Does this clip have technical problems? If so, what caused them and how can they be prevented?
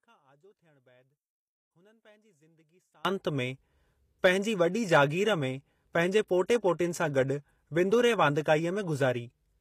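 Yes. The audio was likely passed through HE-AAC compression, which fits a low bitrate of around 24 kbps. The codec keeps only the lower spectrum and rebuilds the treble by copying lower bands upward, so the top end up to the 14.9 kHz cut-off is plainly damaged and mismatched with the harmonics below. Encoding speech at a higher bitrate, or with plain AAC or another full-band codec, would prevent this.

The second fault is an audio dropout to a faint residue. The wanted signal was likely lost somewhere upstream while the rest of the path stayed live, so from the start of the clip until 3.05 s only faint sound remains, roughly 35 dB below normal, before the sound returns abruptly. Checking connections and monitoring the input signal before recording would prevent it.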